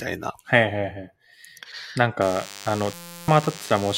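DECT cordless phone buzz runs from 2.21 s to the end. A nearby handset or base station's 100 Hz radio bursts get rectified into the audio, leaving a thin, harmonic-rich buzz around 20 dB below the speech. A system hang loop follows from 2.94 to 3.28 s. A frozen system left the hardware replaying one 5.8 ms block, which fits a 256-sample buffer. That block repeats at 172 Hz as a steady buzz, replacing roughly a third of a second of speech.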